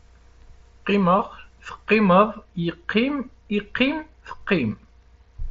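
No faults are present; the speech comes over the Bluetooth mSBC headset codec, whose 16 kHz sampling caps the band at 8 kHz.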